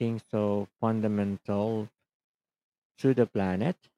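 No technical faults turn up in the speech at any point, so there is nothing to place in time order.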